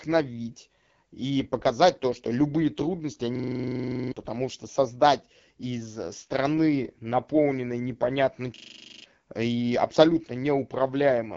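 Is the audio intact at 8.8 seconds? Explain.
No. From 8.56 to 9.04 s, just after "э страны наполненной непонятно" and before "и абсолютно", a system hang loop replaces the speech. The machine or its driver stalled while the sound hardware kept replaying the same 40 ms stretch of its ring buffer, 12 times. That produces a steady buzz at 25 Hz, with roughly half a second of real speech lost. On a waveform the span shows identical 40 ms blocks tiling perfectly. A spectrogram shows evenly spaced vertical stripes, with the same narrow pattern copied across.

That moment also carries the AMR wideband (HD Voice) codec damage that runs through the whole clip. The speech is modelled up to 6.4 kHz from pulse excitation, and the band above is filled with shaped noise. The sound is plainly rough and raspy, which fits the low 8.85 kbit/s mode. A spectrogram shows a hard ceiling with nothing above about 7.3 kHz, a smeared noise-like top band instead of crisp harmonics, and blurred fine structure lower down.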